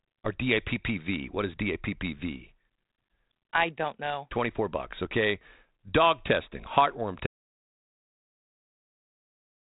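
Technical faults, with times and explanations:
7.27 s to the end: audio dropout to silence. Right after "testing heartworm" the speech cuts off and the rest is silent, with not even room tone left. That likely means the input was lost while recording carried on. The sound up to that point is band-limited G.726, with nothing above 3.8 kHz.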